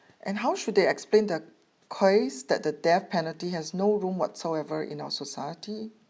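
Speech recording with no audible technical faults.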